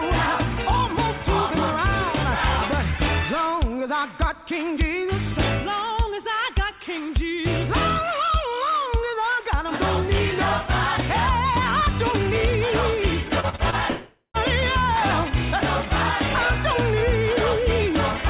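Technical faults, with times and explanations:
13.40–13.75 s, repeated packet loss (robotic sound): four short holes punch through this stretch, the longest about 34 ms, and roughly a third of it gets patched by stretching out the last bit of sound. That rapid stop-start patching is what gives it that choppy, robotic edge.
13.90–14.37 s, long network dropout: the sound smears into a fading buzz or hiss for most of this half-second, then there's a brief silence of about 80 ms before it picks up again further along, with roughly 450 ms missing. That's likely a network dropout, with the receiver papering over the gap until it ran out of sound to extend.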